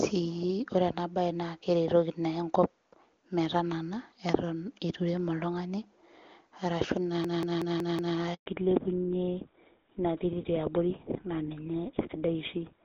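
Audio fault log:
7.25 to 8.17 s, system hang loop: a 186 ms stretch of the speech repeats exactly five times. The repeat rate of about 5.4 per second gives a machine-gun stutter, which fits an 8192-sample ring buffer that the sound hardware kept replaying while the driver or computer was frozen. On a waveform the same block appears again and again with identical shape. On a spectrogram a vertical pattern repeats at even intervals, ending with a hard join at each seam.
8.34 to 8.46 s, handover gap: the speech fades out over a few tens of milliseconds and then stays silent for the rest of the 120 ms gap. The call was being moved between networks, and no speech frames reached the phone during the switch. Whatever was said in that window is gone. A waveform shows a short decay into a flat line. A spectrogram shows a blank vertical band across all frequencies until the new link begins.
8.46 to 12.84 s, fallback to narrowband: from the end of that gap to the close of the clip, the call drops from HD Voice, AMR-WB at 23.85 kbit/s, to GSM full rate at 13 kbit/s. 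Before the drop the wideband codec is clean. Now nothing above 4 kHz remains, so the speech becomes duller and rougher and loses the crisp detail of its sibilants. A spectrogram shows energy that reached toward 7 kHz cut off sharply at a flat 4 kHz ceiling.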